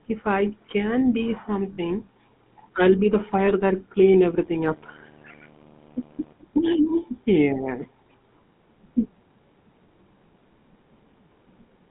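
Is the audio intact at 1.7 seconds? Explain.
No. From 1.74 to 1.78 s there are lost GSM frames: about 40 ms, consistent with two 20 ms frames, where the decoder repeated the last good frame's settings. It sounds like a brief rough, metallic ring. A spectrogram shows frozen, smeared harmonics, and the waveform shows a short, repetitive patch.

Under this, the GSM full-rate codec runs throughout, consistent with 13 kbps coding. It models the vocal tract and drives it with sparse regular pulses, giving a plainly audible buzzy, gravelly roughness. On a spectrogram, energy sits between 150 Hz and 3.5 kHz, with nothing above.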